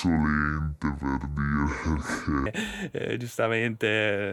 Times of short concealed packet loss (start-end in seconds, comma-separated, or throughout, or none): none